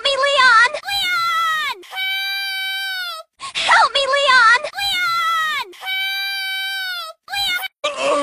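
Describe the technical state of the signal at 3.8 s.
At 3.8 s the signal is intact, with no technical fault present at that moment.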